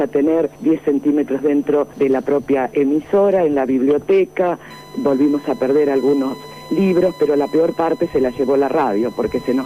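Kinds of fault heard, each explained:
USB whine: Current drawn by the USB bus in its regular 1 ms frames is leaking into the audio path through a shared power or ground connection, so the frame rate itself becomes audible. From about 4.7 s to the end of the clip, a steady whine of fixed pitch at 1 kHz sits under the sound. The 1 kHz tone is its strongest component, and it sits roughly 25 dB below the main signal.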